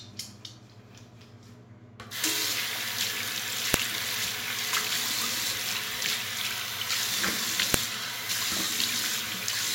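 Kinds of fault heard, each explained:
File header played as audio: two sharp, loud clicks at 3.74 s and 7.74 s, four seconds apart. This is the signature of pieces joined without stripping their WAV headers, so those few dozen header bytes reproduce as raw samples at each piece boundary, regardless of the surrounding sound.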